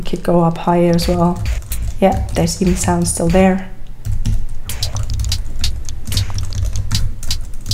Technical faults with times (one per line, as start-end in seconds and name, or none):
5.63-6.92 drift correction step